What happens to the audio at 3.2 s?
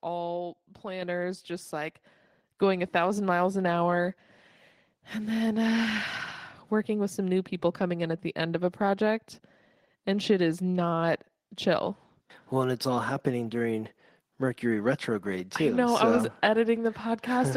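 Nothing goes wrong at 3.2 s; the speech plays through that moment intact, with no dropout, click, distortion or other fault.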